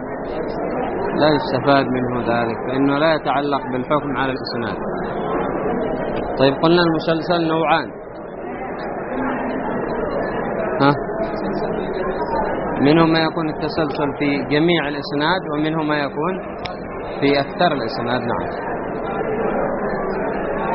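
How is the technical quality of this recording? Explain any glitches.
Nothing stood out as a glitch or technical problem on listening to this recording.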